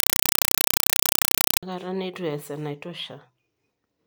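From the start to about 1.63 s you get a compressed stream played as audio: an AC-3 bitstream fed out as if it were plain samples. Each frame lands as a 4 ms blast of noise then silence, 31.25 times a second, so it's loud, chattering static instead of the speech.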